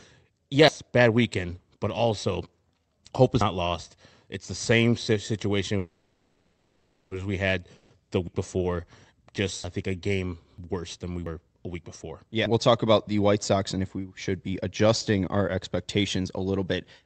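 At 0.68 s, just before "bad weekend but also", a sudden jump in the speech marks a dropped buffer (overrun), likely from the program failing to read its input before the hardware overwrote it. Around a tenth of a second is lost and the two sides are spliced with no silence. The same skip recurs at 3.41, 8.28, 9.64, 10.58 and 11.26 s.

From 5.78 to 7.13 s, after "the same situation" and before "as we had the", there is a call audio freeze. The receiver likely ran its jitter buffer dry while packets were held up in transit, so it stretched the last sound into a fading buzz or hiss for 1.33 s. A shorter freeze of 0.13 s follows at 7.77 s, after "situation as we had". Nothing is lost in either freeze, but each one inserts delay.

Between 12.30 and 13.81 s a jitter buffer speed-up cuts that built-up delay. The receiver trims short pitch-period pieces, running the speech at 106% of normal speed with the pitch unchanged. 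About a tenth of a second is removed, and the passage sounds slightly hurried. Another dropped buffer lands inside it at 12.46 s.

All of this passes through the Opus call path, which limits the audio to 8 kHz.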